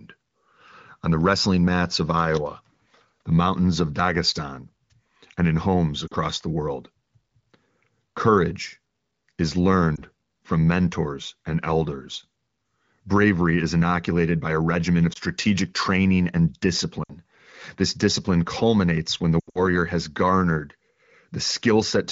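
Lost AMR speech frames occur at 6.08 s, 9.95 s just before "from mentors and elders", 15.13 s between "by a regimen of" and "training and", 17.03 s, and 19.40 to 19.60 s after "discipline culminates when the". Radio errors corrupted these frames, so the decoder reused the last good pitch and vocal-tract settings at falling gain. The 20 ms losses are brief dips. The 40 and 60 ms losses drop to near silence within two frames. The final cluster, 140 ms scattered over 160 ms with an 80 ms run, drops to near silence, then "has garnered" returns weak.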